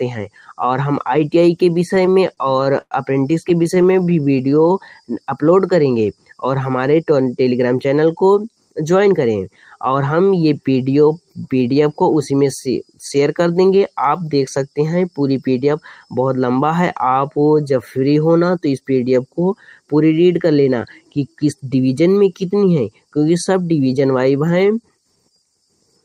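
From 1.95 to 4.13 s there are repeated stalls (stutter). Packets arrived late, so the jitter buffer kept running empty. The receiver stretched the last sound across 16 gaps, about 277 ms in all, the longest 99 ms. Nothing is lost, but the sound drags and stutters.

A jitter buffer slow-down follows from 4.22 to 5.03 s. Repeated pitch periods add 95 ms to rebuild the reserve. The sound plays at 89% speed with unchanged pitch.

Jitter buffer speed-ups occur from 7.00 to 7.85 s, 18.42 to 18.81 s, and 25.16 to 25.38 s. The buffer held too much, so short pitch periods were cut, around 70, 50 and 40 ms. The sound runs at 109%, 111% and 115% speed, hurried but at the same pitch.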